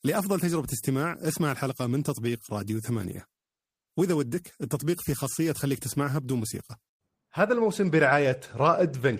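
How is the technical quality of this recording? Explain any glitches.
No technical faults are audible.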